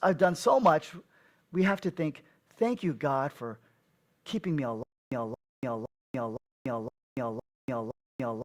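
A stall in the player or stream, likely with each retry replaying its last buffered fragment before running dry, causes a stutter with silent gaps from 4.83 s, just after "keeping me", to the end of the speech. The same 226 ms burst returns seven times at an even 513 ms pace, each followed by about 287 ms of dead digital silence, and whatever speech belonged in that stretch is lost.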